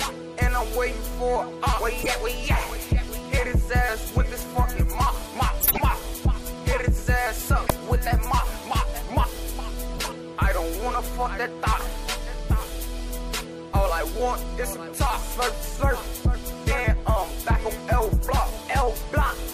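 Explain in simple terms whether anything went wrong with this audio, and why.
Four brief glitches break into the sound at 2.01–2.10 s, 5.60–5.81 s, 7.67–7.71 s and 9.93–9.99 s, each heard as a short chirp or burst of noise. This is a corrupt frame decoded: a few of the compressed data blocks were damaged, and the decoder played them anyway. The garbled data put sound at the wrong pitches, so each blip lasts only as long as the damaged stretch. The last one is noticeably quieter.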